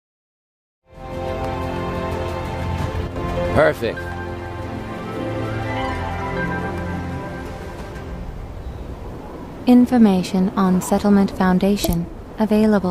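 After a smooth fade-in that settles by about 1.37 s, the level drops abruptly at 3.07 s and recovers at 3.16 s, a dip of roughly 90 ms. Everything shared between the two sides falls by about 6 dB for that span. The hard edges on both ends make it a brief, abrupt level dip. This is most likely one channel dropping out, with the mono sum losing half its contribution.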